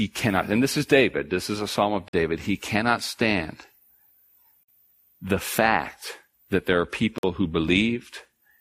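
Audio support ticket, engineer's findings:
Gap between chunks at 2.08–2.13 s, 4.63–4.68 s and 7.18–7.23 s: 50 ms silences in the speech, e.g. after "is a psalm of" and before "he cannot stand", and after "fact that there are". Repeats every 2.55 s, i.e. 2.5 s chunks plus a 50 ms hole. Probable component: chunked transport or player. Padding or late start at each join inserts silence. Nothing dropped, just interrupted.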